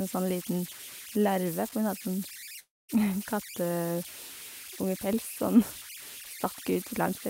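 It's a speech recording with two problems. The whole way through there's a whistle sitting around 2 kHz, plus a grainy texture under the quieter bits, at about 13 dB below the signal. Those are converter idle tones: an undithered delta-sigma converter drops into repeating bit patterns when its input gets small, and those loops come out as a steady pitched tone rather than smooth noise. Then at 2.59 s the audio breaks off until 2.91 s. The last bit of sound is stretched into a short fading buzz, and most of the gap, around 230 ms, is plain silence. When the speech picks up again, roughly 0.3 s of it is simply gone. That's most likely a long network dropout, where packets stopped arriving, the receiver tried to paper over the gap by extending what it last had, and then gave up until the stream resumed.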